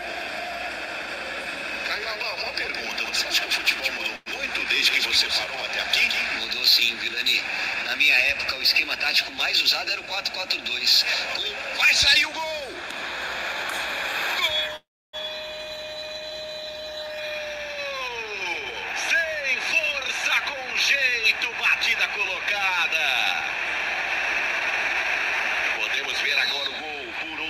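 From the start until 6.40 s a doubled audio track runs: a full-band copy about 5 dB quieter trails by roughly 150 ms, likely a second capture path or misaligned edit. The spectrogram shows every onset repeated without decay, and the copy stops abruptly at 6.40 s.

Within that stretch, at 4.16 to 4.29 s, a call audio freeze adds about 0.1 s: the last sound is stretched into a short fading buzz, with 20 ms of silence, before the audio resumes where it stopped. A longer freeze at 14.76 to 15.16 s inserts 0.37 s, mostly a 0.31 s flat gap in the waveform, likely from packets held up until the jitter buffer emptied.

From 16.99 to 20.41 s, jitter buffer speed-up plays the sound at 107% speed with unchanged pitch, trimming roughly 0.3 s through many tiny pitch-period cuts. It sounds hurried. The spectrogram keeps its harmonic spacing while events crowd closer. The same happens from 26.02 to 27.38 s, removing roughly 0.1 s.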